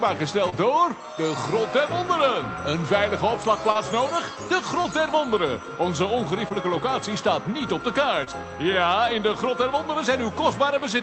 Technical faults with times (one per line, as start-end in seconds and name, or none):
0.49-0.54 short concealed packet loss
3.72-3.79 short concealed packet loss
4.82-4.86 short concealed packet loss
6.48-6.52 short concealed packet loss
8.24-8.28 short concealed packet loss